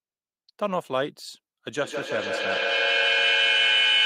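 Feedback howl takes over this speech recording from 1.73 s to the end. A tone near 3 kHz builds to about 4 dB above the speech and pulses roughly every 150 ms: the microphone-to-loudspeaker loop adds gain each pass, so repeats grow instead of dying.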